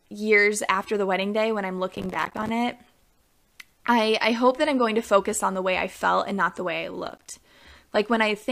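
Speech with processor overload crackle at 1.92–2.49 s and 7.05–7.36 s. Dozens of tiny silent gaps, each roughly one 5 ms buffer long, make a gritty tearing, unlike single isolated dropouts.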